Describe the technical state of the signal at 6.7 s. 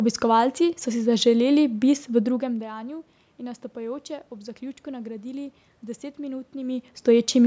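At 6.7 s the audio is intact, with no technical fault in the signal at that moment.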